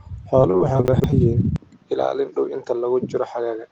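Repeated packet loss (robotic sound) runs from 0.41 to 1.14 s. Audio keeps dropping out, each hole patched by stretching the sound just before it, with the longest gap about 24 ms. Roughly a quarter of the stretch is filled this way, so the speech turns choppy, with pieces missing.

Chunks out of order occur inside that stretch, between 0.88 and 1.04 s. A 40 ms chunk plays three chunks later than it should. Nothing is missing, but the jumbled order and three hard joins produce a garbled moment.

From 1.56 s to the end, the sound changes in a way that points to an input switched to a poorer device as the likely cause. A 20 ms silence marks the switch. After it, nothing remains above 7.1 kHz, the level drops about 5 dB, and a new noise floor appears, roughly 40 dB below the speech. The result is duller, boxier speech.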